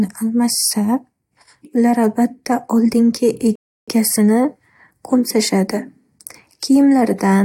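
At 3.55 s the speech halts and falls to silence until 3.88 s, a rebuffering stall: the player exhausted its downloaded audio and waited about 0.32 s for more data before carrying on. The telling sign is that speech picks up exactly where it broke off, with no syllable missing, so the gap adds time rather than removing any. A network dropout or packet loss would instead skip past a piece of the audio.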